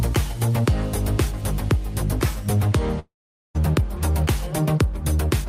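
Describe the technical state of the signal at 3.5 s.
At 3.5 s you're in the silent tail of a long network dropout, 2.99 to 3.57 s, likely a stalled stream: the concealment buzz has faded, leaving near-silence.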